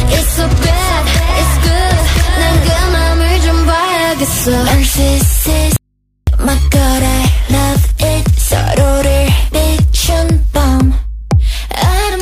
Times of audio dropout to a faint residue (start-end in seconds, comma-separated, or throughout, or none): 5.76-6.27